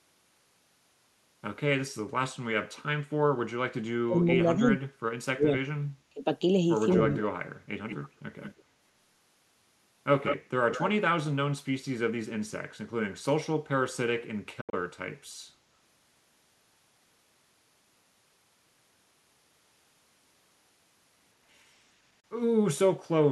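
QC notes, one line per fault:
4.06–5.0 s, 5.33–5.67 s, 6.1–6.24 s, 7.08–7.37 s, speech suppressed in double talk: the speech dips sharply in four places, the deepest by about 35 dB at 4.06–5.0 s, about 30 dB at 5.33–5.67 s and 7.08–7.37 s, and about 20 dB at 6.1–6.24 s, affecting about 400, 300, 150 and 200 ms. This is likely an echo canceller turning down its own talker while the far side also spoke. On a waveform the envelope collapses in short gated troughs. A spectrogram shows the energy thinning or vanishing across bands, upper harmonics first.
6.89–7.22 s, 7.89–8.09 s, 8.42–8.63 s, 10.24–10.91 s, echo leak: a delayed copy of the speech trails it by 182 ms, about 10, 15 and 20 dB below the direct sound in the first three bursts and only about 5 dB below at 10.24–10.91 s. This is likely residual loudspeaker pickup that got past the far end's canceller. A spectrogram shows duplicated harmonic contours offset 182 ms to the right. 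On a waveform, smaller repeated envelopes appear behind the main ones.
14.61–14.74 s, 22.2 s, Bluetooth dropout: the output cuts to silence. The first event loses about 100 ms in pieces across roughly 116 ms, with the longest gap 73 ms. The second loses about 29 ms. This likely comes from packets that missed their deadline on the wireless link. The sound resumes further on, as if it had kept playing. The waveform drops flat to silence, and a spectrogram shows clean full-band vertical blanks.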